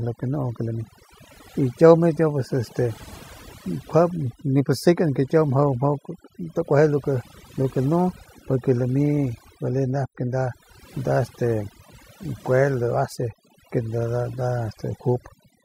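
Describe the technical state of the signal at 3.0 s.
At 3.0 s a nearby 2G phone on a call is transmitting in bursts 217 times a second, and the audio circuitry rectifies those radio pulses. This GSM phone buzz runs steadily from 2.01 s to 3.18 s as a hard, raspy 217 Hz buzz with many harmonics, about 27 dB below the speech and unrelated to it.

Underneath, overdone noise removal affects the whole clip. The noise reduction was set too strong, so frequency bands near its noise estimate are pulled far down or cut out, taking quiet parts of the speech with them. The background drops and breaks up into twinkling specks.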